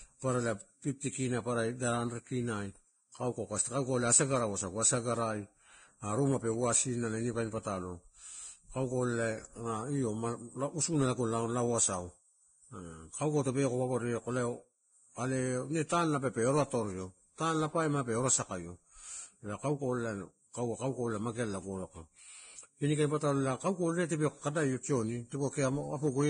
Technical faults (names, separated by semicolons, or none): Vorbis compression